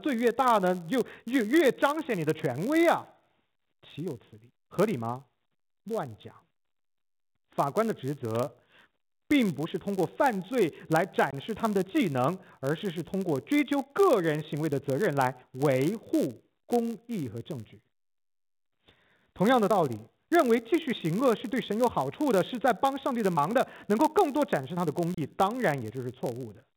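Block size mismatch (padded) runs from start to finish: one stage hands over blocks slightly shorter than the next stage expects, and the shortfall is padded with zeros. The resulting tiny gaps repeat at 91.5 Hz, giving a steady buzz, and the speech runs at 0.996 times normal speed with its timbre unchanged.

Packet loss filled with silence cuts the speech from 11.31 to 11.33 s and again from 25.14 to 25.17 s. These are holes of 20 ms and 30 ms, which fits two and three lost 10 ms packets replaced by silence, and both have hard edges. The band-limited G.711 telephone sound is otherwise working normally.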